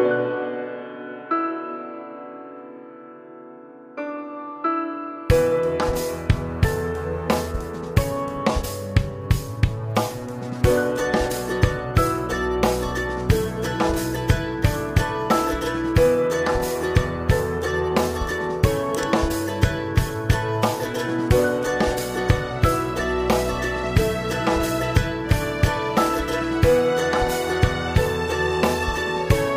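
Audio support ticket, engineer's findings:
Nothing stood out on listening; no audible issue to report.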